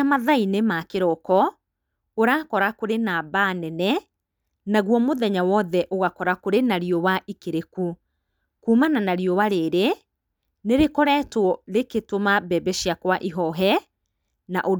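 No technical faults can be heard anywhere in this recording. There is no moment in the audio that needs a time or a value marked against it.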